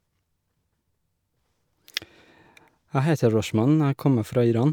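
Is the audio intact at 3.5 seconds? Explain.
Yes, the speech at 3.5 seconds is intact, with no dropout, click, distortion or other fault at that moment.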